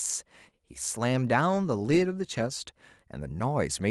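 No technical faults detected.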